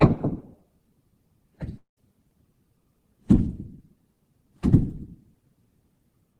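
At 1.77 s the sound breaks off and does not resume until 1.99 s. The last fragment carries on as a fading buzz, then drops to near silence for roughly 120 ms. When the audio returns, about 200 ms of material is simply gone, with no catch-up. This is likely a long network dropout. Packets stopped arriving, the receiver stretched what it last had, and the lost stretch was never played.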